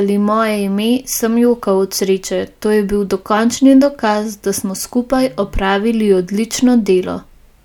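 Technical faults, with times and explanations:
Nothing technical gets in the way here; the speech comes across steady and intact with no faults to point to.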